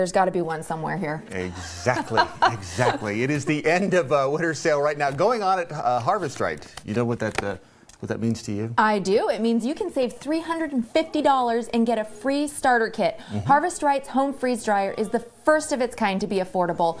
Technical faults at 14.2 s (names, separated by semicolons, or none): none